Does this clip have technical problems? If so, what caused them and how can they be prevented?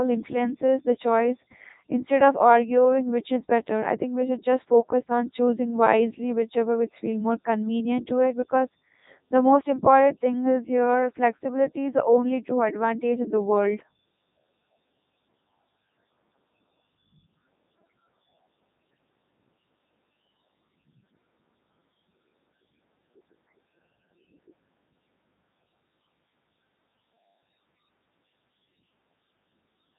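Yes. Codec 2 vocoder damage runs throughout: the sound is heavily robotic and buzzy, with nothing above about 3.8 kHz, which fits its 3.2 kbit/s mode, because the decoder rebuilds speech from pitch and spectral envelope. To prevent it, record or transmit through a waveform-preserving codec at a higher bitrate.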